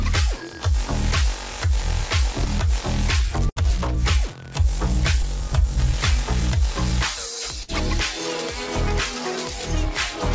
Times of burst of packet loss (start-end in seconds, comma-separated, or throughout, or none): 3.49-3.58, 7.63-7.70